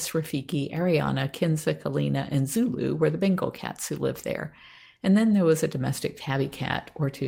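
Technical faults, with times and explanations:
Nothing technical stands out in this recording; there's no fault to point to at any moment.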